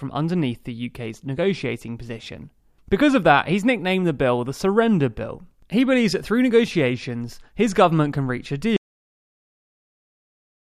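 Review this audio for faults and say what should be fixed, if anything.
At 8.77 s the sound drops out to dead silence, no room tone, right through to the end: an audio dropout to silence, likely a lost input while recording kept running. Next time, lock down cables and mutes and watch the input meters.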